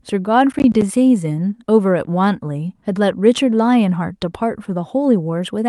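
Speech with a short burst of gritty crackle tearing through the sound from 0.52 to 0.82 s. This is processor overload crackle: the processor fell behind and missed about five buffer deadlines, each leaving a hard-edged dropout of silence, with gaps that point to buffers of around 20 ms.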